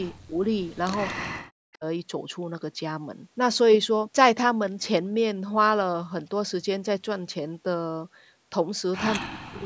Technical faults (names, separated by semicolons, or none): speech suppressed in double talk; echo leak